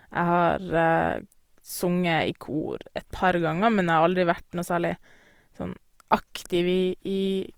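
Throughout, the speech sounds grainy and rough, with noisy fill. This is likely Opus compression in its music mode, near 24 kbps. Content still reaches about 20.3 kHz.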